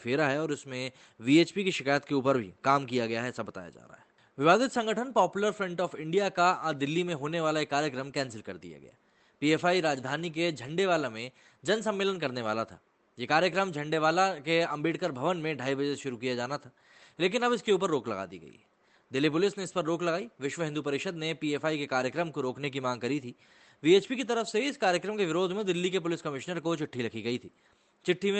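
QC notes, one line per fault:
No faults found; the call path is audible as a top end that stops at about 8 kHz.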